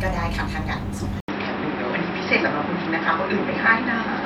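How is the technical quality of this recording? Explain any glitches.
The recording has one clear fault. At 1.2 s the input was likely switched to a poorer device, with about 80 ms of silence at the switch. Until the end, nothing is passed above 5.6 kHz, so the speech turns dull and boxy, the level shifts by several decibels, and a new background noise floor appears roughly 40 dB below the speech.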